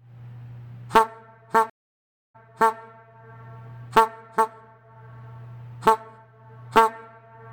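The audio has a stream reconnect between 1.70 and 2.76 s. The sound cuts out and about 0.65 s of silence follows while the player drops its broken connection and reconnects. A new decoder then starts in mid-stream. Playback does not pick up where it stopped. It resumes about 0.42 s earlier, so a short stretch of sound is heard twice. This fits a server resending a burst of buffered data. The first moments after the gap come back muted or faded in.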